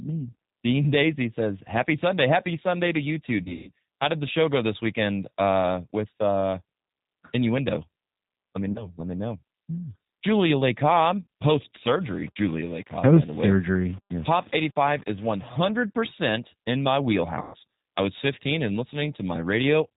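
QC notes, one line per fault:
Throughout: G.729 codec, plainly audible. The speech is rebuilt from a vocal tract filter, a pitch predictor and sparse pulses at 8 kbit/s, so it sounds rough and slightly synthetic. A spectrogram shows nothing above 4 kHz, with a smeared, grainy look to the harmonics.
3.43 to 3.69 s: VoIP packet loss concealed by the speech codec. About 180 ms went missing across 240 ms, with the longest gap 150 ms, and the decoder stretched the last pitch and filter into a buzzy tone or coloured noise that fades. On the spectrogram the harmonics freeze into flat lines while the waveform envelope decays.
8.72 to 8.88 s: VoIP packet loss concealed by the speech codec. A single 30 ms gap, which fits one lost packet, is bridged by a brief repeat of the preceding frame. The speech stays weak or distorted afterwards while the decoder's state recovers. It shows as a short smeared patch.
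17.42 to 17.56 s: VoIP packet loss concealed by the speech codec. About 120 ms was lost and filled by extrapolation, so a sustained buzz or coloured noise fades out before speech returns, still subdued at first. The spectrogram shows static harmonic bands, and the waveform shows a tapering, repetitive stretch.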